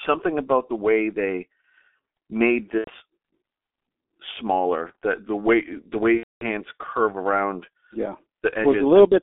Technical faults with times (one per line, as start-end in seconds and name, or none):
0.00-9.22 G.723.1 codec
2.78-2.91 VoIP packet loss concealed by the speech codec
6.17-6.45 VoIP packet loss concealed by the speech codec